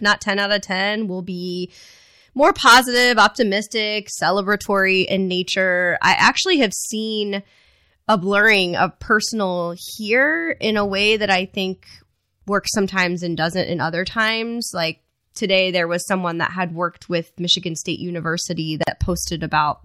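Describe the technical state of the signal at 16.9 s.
At 16.9 s the speech signal is intact, with no fault audible at that moment.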